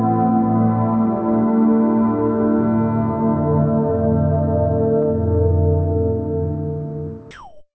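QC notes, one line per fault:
7.31–7.74 s, comfort noise in place of the background: the final 0.44 s of background, about 24 dB below the loudest sound, becomes steady, featureless and about 3 dB quieter, likely synthetic fill during discontinuous transmission. The spectrogram shows smooth, detail-free texture, and the waveform shows a flat, even noise floor.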